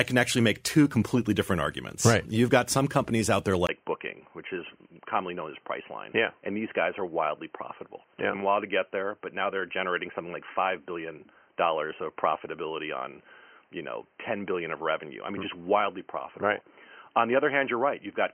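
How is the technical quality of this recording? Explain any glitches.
The recording starts clean but degrades early and stays degraded. At 3.67 s, right after "some companies out there", there is a brief gap of about 20 ms. The speech then turns dull and boxy, with nothing above 3.1 kHz. It also gets somewhat quieter and picks up a faint new background noise. This points to an input switched to a poorer device, likely a headset's narrowband call profile or a lesser microphone. The change lasts to the end.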